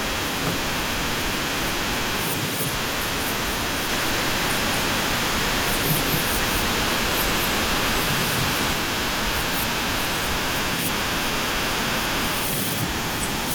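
Speech, with a doubled audio track from 3.89 to 8.73 s. A second full-band copy trails about a fifth of a second behind, somewhat quieter. It has no room colour and cuts in and out abruptly. A slower duplicate capture path is the likely cause.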